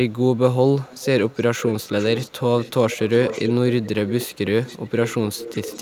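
Echo leak at 0.84–1.07, 1.27–2.43, 2.59–3.52, 3.82–3.89, 4.06–4.38, 4.62–5.15 and 5.31–5.8 s: a quieter copy of the speech trails it by about 0.38 to 0.40 s, strongest from 1.27 to 3.52 s, likely a far-end echo canceller letting loudspeaker pickup through.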